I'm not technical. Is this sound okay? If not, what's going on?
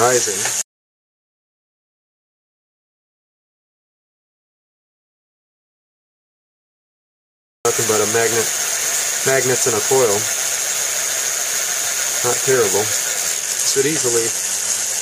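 No. The sound cuts out at 0.62 seconds and stays completely silent until 7.65 seconds. That is an audio dropout to silence, and it lasts about 7 seconds. The gap is dead quiet, with no background hiss or room sound at all. The cause was likely a lost input, such as a cable or device disconnecting or a mute switched on, while the recording kept going. Whatever happened during that gap was never captured.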